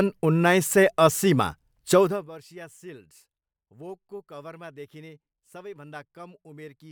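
No technical faults are audible.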